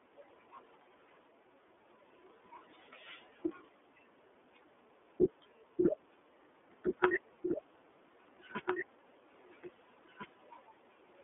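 From the start, the speech carries iLBC codec damage, and it is plainly audible. The band runs from about 300 Hz to 3.5 kHz, with nothing above 3.7 kHz. Each 30 ms frame is coded on its own. The result sounds rough and slightly synthetic. This fits the 13.33 kbps mode.

At 6.83 s a doubled audio track begins abruptly and lasts to the end. A second, full-band copy trails the original by roughly one and a half seconds, about 5 dB quieter, with no room colour. The likely cause is a second, slower capture path.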